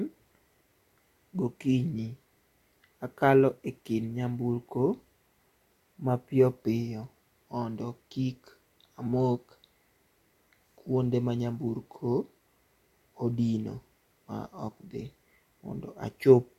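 A recording of speech, with no technical fault to point to anywhere in it. Nothing breaks up, drops out or distorts at any moment.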